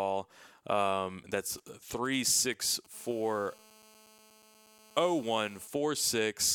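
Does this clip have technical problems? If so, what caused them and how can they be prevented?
Yes. From 1.58 s to 2.87 s there are GSM signalling bursts. Short groups of brief 217 Hz buzzes come in a galloping dit-dit-dit rhythm, roughly 25 dB below the speech. A nearby 2G phone is exchanging brief radio bursts with the network. The audio circuit rectifies those pulses into sound. To prevent it, keep mobile phones switched off or well away from the microphone, cables and recorder.

From 2.94 s to 5.68 s there is GSM phone buzz. It is a hard, raspy buzz at 217 Hz with many harmonics. It sits about 27 dB below the speech. It holds steady and has no relation to the speech. The phone has moved into a call and now transmits 217 bursts every second. The audio circuit rectifies each burst, which produces the tone. To prevent it, keep active phones away from the recording chain and use shielded, properly grounded cables.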